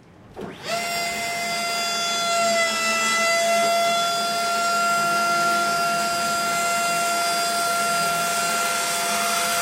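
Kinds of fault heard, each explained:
No kinds of fault are heard in this audio.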